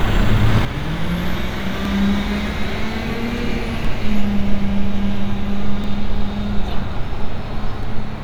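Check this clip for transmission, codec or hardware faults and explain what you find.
Two faults are audible: a sudden gain jump and audio missing between chunks.

At 0.65 s the level drops by about 9 dB in a single step. It stays low until the end. The sound and the background noise fall together, with no fade. The likely cause is a digital gain setting or bit shift applied from one sample to the next without a ramp. The abrupt step can also leave a small click at the change.

Short skips occur at 1.85, 3.85, 5.84 and 7.83 s. That is one every 2 s, and each loses around 7 ms. The two sides are butted together with no silence, so each gap is heard as a tiny jump. The steady 2 s spacing points to audio being handled in 2 s chunks. A piece is likely dropped each time one chunk closes and the next opens.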